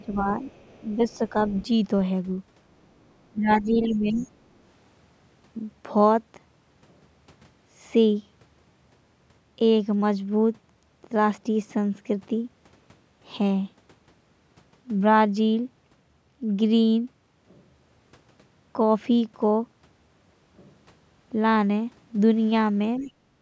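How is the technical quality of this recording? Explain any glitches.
The recording has echo-control problems concentrated in the first few seconds and the last half second, all consistent with a call where both ends talked at once. The band stops at 8 kHz, as expected from call microphone processing.

Speech suppressed in double talk occurs at 0.00–0.42, 0.81–1.21, 3.32–4.26 and 22.99–23.10 s. The talker dips by roughly 5 to 15 dB, briefly near the end and for close to a second around 3.3–4.3 s. The likely cause is an echo canceller that couldn't separate the local voice from loudspeaker echo and turned both down. On a waveform the envelope sags abruptly, and a spectrogram shows the upper harmonics thinning.

The other side's voice leaking through appears at 0.04–1.66, 3.49–4.27 and 23.02–23.12 s. It is a faint second voice, about 20 to 35 dB below the talker and strongest around 3.5–4.3 s. 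It likely comes from loudspeaker playback the canceller failed to remove. A spectrogram shows weak, unrelated harmonic traces overlapping the main voice.

Background gated by the echo canceller happens at 23.38–23.41 s. The room sound drops by about 8 dB for around 40 ms as the canceller clamps the microphone, then the clip ends. On a waveform the noise floor shows a small notch, and a spectrogram shows a thin vertical gap.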